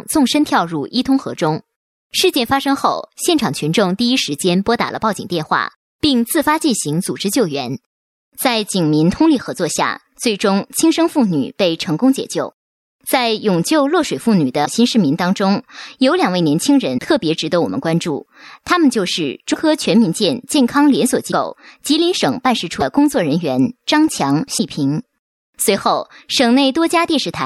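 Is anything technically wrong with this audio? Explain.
Yes. Six brief glitches break up the second half, at 14.64–14.67, 16.97–17.00, 19.53–19.56, 21.30–21.33, 22.79–22.82 and 24.57–24.60 s. Each is about 30 ms, where the audio jumps ahead. The likely cause is a broken MP3 bit reservoir. Dropped frames of about 26 ms leave the following frame reading back into the wrong data.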